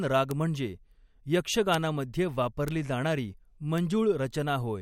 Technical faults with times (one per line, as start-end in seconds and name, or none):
0.31 bit error spike
1.74 bit error spike
2.68 bit error spike
3.78 bit error spike